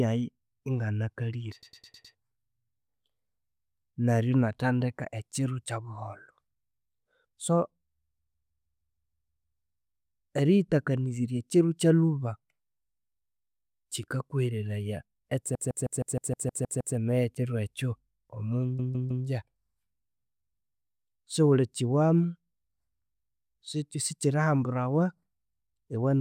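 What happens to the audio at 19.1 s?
At 19.1 s the speech stutters from 18.79 to 19.26 s: repeated frames replay a 156.7 ms block three extra times, adding 470 ms.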